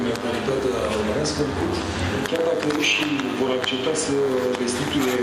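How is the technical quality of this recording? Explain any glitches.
The recording's technical quality is compromised by one persistent fault. DECT cordless phone buzz runs through the entire clip: a thin, steady buzz at 100 Hz, rich in harmonics, sitting about 10 dB below the wanted sound. A nearby DECT handset or base transmits a short radio burst every 10 ms, and the audio circuitry rectifies those bursts into audible pulses. On a spectrogram this appears as a ladder of evenly spaced horizontal lines at multiples of 100 Hz, and the waveform shows a regular pulse train repeating every 10 ms.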